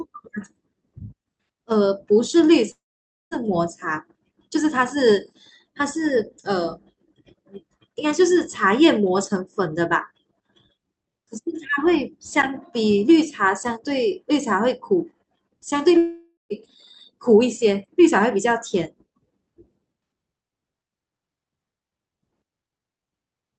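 Speech with gaps at 2.71–3.34 s and 15.97–16.53 s. Each fades into a buzz, then silence, likely from a long network dropout.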